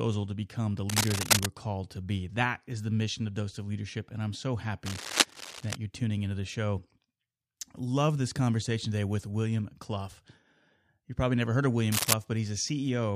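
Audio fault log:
0.89 to 1.46 s, 4.85 to 5.76 s and 11.91 to 12.13 s, cable scratch noise: three short stretches of dense, irregular crackle and rustle sit over the speech, roughly as loud as the speech in the first two and somewhat louder in the last. The likely cause is a worn cable, connector or control being moved, so that its contact resistance jumps about rapidly and injects uneven bursts of noise that are heard as scratching.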